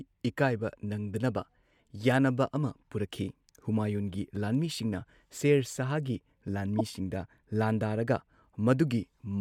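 Corrupt frames decoded at 4.12–4.14 s and 6.78–6.81 s: damaged compressed data misplaces spectral energy, giving a faint blip, then a much louder burst of noise.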